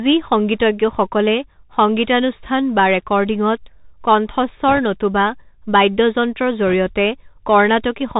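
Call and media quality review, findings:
Bluetooth CVSD headset codec throughout: spectrogram empty above 4 kHz, scratchy sibilants, granular hiss floor, loud highs overloading the adaptive step, consistent with a 64 kbit/s CVSD link.

Bit errors on a Bluetooth voice link, 4.68–4.79 s and 6.68–6.74 s: short rushing crackle, broadband speckle on spectrogram, no click spikes in waveform, error rate around one to two percent.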